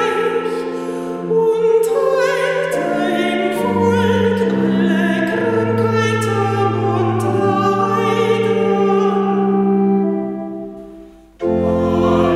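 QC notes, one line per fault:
No technical faults can be heard anywhere in the signal.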